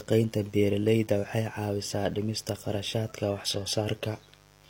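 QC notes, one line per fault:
Throughout: mains buzz. A steady, raspy buzz sits under the speech, built on the 50 Hz mains frequency with harmonics climbing well into the kilohertz range. Sharp switching spikes arrive twice per mains cycle, likely leaking in through a dimmer, rectifier or poor shielding. The buzz is fairly low, roughly 30 dB below the speech.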